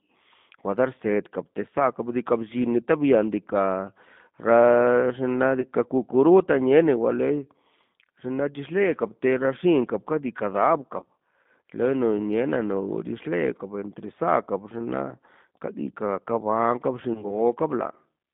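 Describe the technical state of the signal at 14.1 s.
At 14.1 s the speech carries G.729 codec damage, present throughout the clip. The 8 kbit/s coder rebuilds it from a filter, pitch predictor and pulses. Band spans 150 Hz to 3.6 kHz; it sounds rough and synthetic.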